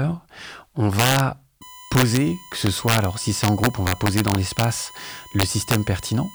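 Integer overflow first strikes at 0.99 to 1.20 s and returns at 1.95 to 2.17, 2.67 to 3.04, 3.44 to 4.64 and 5.40 to 5.75 s. On each, loud speech peaks run 2 to 3 dB past the largest integer value and wrap to the opposite sign instead of being limited, giving violent cracks far sharper than clipping.

USB whine enters at 1.62 s and continues to the end. It is a steady 1 kHz tone, roughly 20 dB below the speech, from the USB bus's 1 ms frame activity leaking into the audio through the power or ground path.

Chunks out of order appear at 4.32 to 4.36 s, inside the longest overflow stretch. A 20 ms chunk plays one chunk late, after the audio meant to follow it. Nothing is missing, but the hard joins produce a brief jumbled moment.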